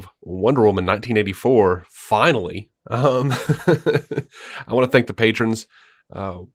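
The clip is speech, and nothing is technically wrong with it, so there are no times or causes to give.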